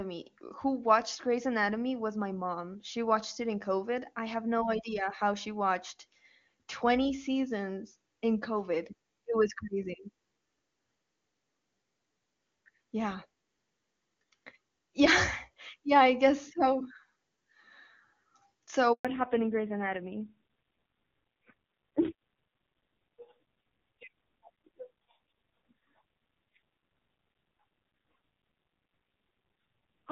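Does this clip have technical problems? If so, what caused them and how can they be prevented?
Yes. A handover gap runs from 18.93 to 19.05 s: the call switched networks, no speech frames arrived for 120 ms, and the sound drops to silence. A fallback to narrowband follows from 19.05 s to the end: everything above 4 kHz disappears and the speech turns duller and rougher. The clear wideband sound before this points to HD Voice at around 23.85 kbit/s, and the coarse result after it points to a narrowband codec at roughly 5.9 kbit/s. Keeping the call on one network with solid coverage, or on networks that both carry HD Voice, would avoid the switch and the drop in bandwidth.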